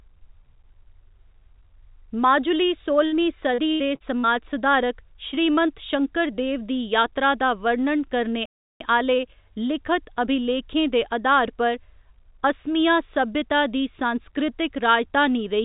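A burst of packet loss at 3.06 to 3.14 s: several consecutive packets failed to arrive in time, and the receiver extended the last sound for about 60 ms while fading it down. A held buzz or hiss is heard, and the speech resumes with roughly 60 ms of material gone.

Repeated packet loss, heard as robotic sound, runs from 3.54 to 4.26 s. Four separate gaps, the longest 79 ms, are each patched by continuing the preceding sound. About 27 percent of this stretch is synthetic fill, so the speech turns choppy with fragments missing.

Short concealed packet loss occurs at 5.32 to 5.35 s, 5.35 to 5.39 s and 5.67 to 5.70 s. Each time, about 20 ms never reached the decoder. It was bridged with 10 to 19 ms of extrapolated signal and blended back, leaving a brief smear or wobble where a consonant may drop out.

A playback stall follows at 8.46 to 8.80 s, right after "यात्रा दा वर्णन करने". The output goes silent mid-flow for about 0.35 s and then continues. 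The likely cause is the player running out of buffered data or its audio thread being blocked. Throughout, the band stops at 4 kHz, which fits a narrowband call codec such as G.711 A-law.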